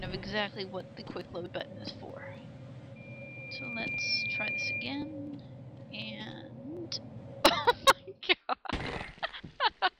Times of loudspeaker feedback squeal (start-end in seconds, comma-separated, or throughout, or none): 2.96-5.14